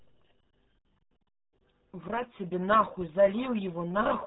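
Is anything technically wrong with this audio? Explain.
Yes, the whole clip has been through the RealAudio 14.4 codec, and it shows. Nothing gets past about 3.9 kHz, which fits an 8 kbit/s dial-up speech codec squeezing hard, so the speech comes out muffled and gargly, with heavy coding damage throughout.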